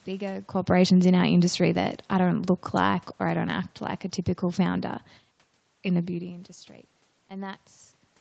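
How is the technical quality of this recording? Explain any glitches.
There's one real glitch here: an automatic gain falling episode between about 0.9 and 3.6 s, just before "like a typical founder". The call's gain control judged the input too loud, or its background noise too strong, and eased its gain down gradually, by about 4 dB overall. You hear the speech start out fairly loud, then slowly sink over those few seconds, and the room noise underneath drops right along with it. That shared dip is the giveaway that it's the processing and not the talker. The top end stops around 8 kHz and there's a bit of codec grain, consistent with a lower-bitrate Opus call path.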